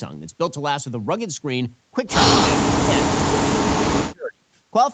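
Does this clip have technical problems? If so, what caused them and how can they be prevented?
Yes. The echo canceller likely could not tell the near talker apart from loudspeaker echo while both sides were talking, so it turned everything down. This is speech suppressed in double talk. The speech sinks sharply, by around 35 dB at its deepest, and breaks into pieces from 2.51 to 3.32 s and again from 3.56 to 4.46 s. Roughly half a second of the first stretch and most of the second are affected. Tuning the canceller's double-talk detection and reducing acoustic coupling between loudspeaker and microphone, for example with a headset, would prevent it.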